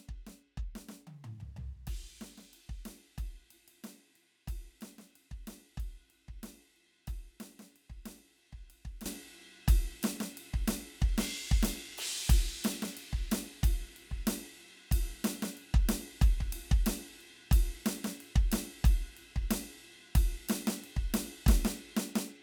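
At 9.06 s the music leaps up in level and stays there to the end. This is a sudden gain jump of about 15 dB. The change happens between one sample and the next, with no fade. The music and its background noise rise together, so the whole mix simply gets louder at once. The likely cause is a digital gain setting or bit shift applied without a ramp.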